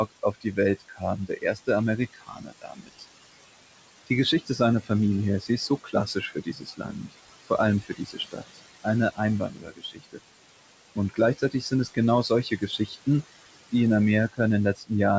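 Throughout, the background sinks between words and swells under them. These noise suppressor artifacts come from bands being pushed down by about 20 dB, frame by frame. Soft consonants and word endings sound swallowed at 0.12–3.04 s, 4.07–4.9 s, 5.41–7.14 s, 7.82–10.19 s, 10.96–11.98 s, 12.29–13.07 s and 14.75–14.91 s, falling by up to about 21 dB. This is speech cut by the noise suppressor, which treated quiet speech as noise.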